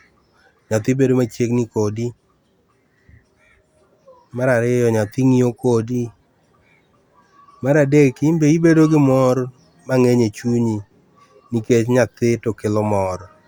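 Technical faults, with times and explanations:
No technical faults are audible in this speech recording.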